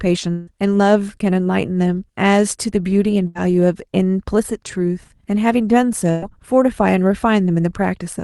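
From 0.31 to 0.50 s, the speech stops and a buzz or hiss carries on in its place, fading but never reaching silence. The likely cause is a long network dropout. About 160 ms of audio never arrived, and the speech resumes past that point.

At 3.27 to 3.38 s, a burst of packet loss removes about 80 ms. The receiver stretches the last sound into a fading buzz or hiss. Again at 6.11 to 6.25 s, about 120 ms is lost and concealed the same way. The speech jumps ahead each time. The Opus call path passes little above 12 kHz.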